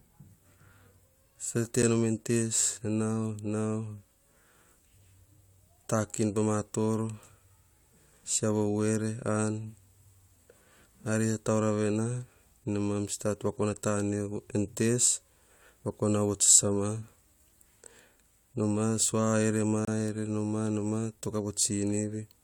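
At 1.82 s, the speech drops out for about 7 ms. A second, longer hole runs from 19.85 to 19.88 s, about 26 ms. Both are gaps between stream segments. Mismatched time stamps left space the player filled with silence. Edges are abrupt. Nothing is lost.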